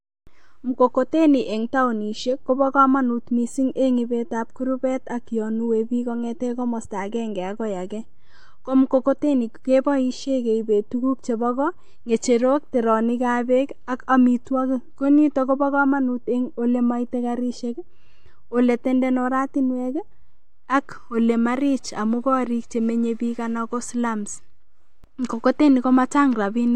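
At 25.04 s a DC step occurs: the waveform's zero line jumps abruptly to a new offset of about -35 dBFS, as happens when a converter recalibrates or an offset-carrying input is switched into the path. The sudden shift is heard as a single low thump under the speech, which continues unaffected. The offset then drains away at a rate that fits a high-pass corner of 2.0 Hz.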